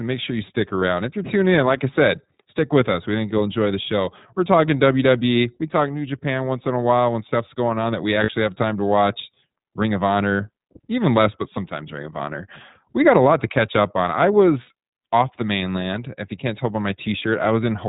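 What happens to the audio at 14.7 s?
Lost iLBC frames hit from 14.62 to 14.69 s, between "catch up on I" and "off the mainland". The decoder fills the roughly 60 ms gap, which fits three 20 ms frames, by repeating the last pitch cycle mixed with noise. It sounds like a brief held, buzzy vowel. Because each frame stands alone, the speech recovers immediately afterward.

The whole clip also passes through the iLBC codec. This narrowband coding removes everything above 4 kHz. It leaves the speech plainly rough and synthetic around this moment too.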